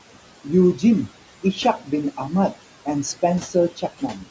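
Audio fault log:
Throughout: noise suppressor artifacts. The steady background is pulled down by about 17 dB frame by frame, so it sinks between phrases and swells back under speech. Unlike a plain gate, the level change shifts band by band rather than switching whole.
1.78–1.92 s and 3.41–4.24 s: speech cut by the noise suppressor. The suppressor mistakes quiet parts of the speech for noise and turns them down with it, by about 14 dB and then about 13 dB. Only a brief moment in the first span and roughly a third of a second in the second sound swallowed. This differs from the steady residue because the speech itself goes faint.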